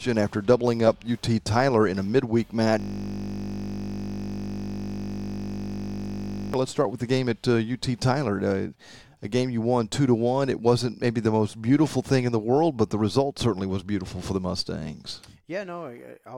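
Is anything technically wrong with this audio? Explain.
Yes. A system hang loop runs from 2.80 to 6.54 s. The system froze while the hardware kept replaying a 20 ms buffer, producing a steady 50 Hz buzz.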